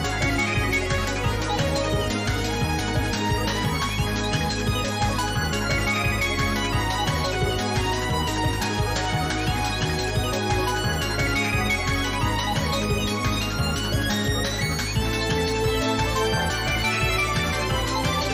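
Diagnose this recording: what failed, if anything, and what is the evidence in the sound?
The playback stage from disc failed briefly: CD scratch ticks, six between 2.92 and 4.13 s, about five a second, the longest about 2 milliseconds. A blemish passing once per revolution beat error correction. Expect thin vertical spectrogram lines and tiny waveform notches.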